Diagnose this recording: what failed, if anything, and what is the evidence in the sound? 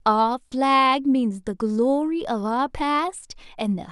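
Nothing in the signal chain failed: no stage, from the analogue wiring through conversion, buffering, processing, transmission and storage to playback, leaves any audible evidence in this speech recording.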